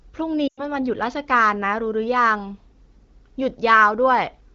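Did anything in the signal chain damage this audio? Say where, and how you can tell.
Yes. From 0.48 to 0.63 s the speech quickly drops to near silence within two frames, then returns thin and rough. These are lost AMR speech frames on the radio link. About 100 ms went missing, which fits five 20 ms frames, and the AMR-WB decoder at 15.85 kbit/s concealed the gap by repeating its last good settings at falling gain.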